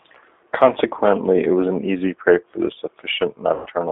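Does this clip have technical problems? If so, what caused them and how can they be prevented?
Yes. Throughout the speech, the sound is thin and slightly rough, with a synthetic edge and nothing above about 3.6 kHz or below about 250 Hz. This is the G.729 codec (the G.729A variant), which fits an 8 kbit/s voice link. Instead of sending the waveform, it sends a vocal tract filter, a pitch predictor and a few pulses per 10 ms frame, and the decoder rebuilds the speech from those, leaving plainly audible coding damage. To prevent this, use a wideband codec such as G.722 or Opus wherever both ends support it.

From 3.54 to 3.68 s, near the end, the speech is stretched out and fades, and sounds weak or distorted. This is VoIP packet loss concealed by the speech codec. About 120 ms of audio never arrived, which fits roughly six lost packets. The decoder filled the gap by repeating its last pitch and filter with falling gain. 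Because each frame builds on the previous one, the sound stays impaired briefly after real packets resume. To prevent this, reduce network loss with QoS priority for voice traffic, a wired connection and an adequate jitter buffer, or use a codec with forward error correction.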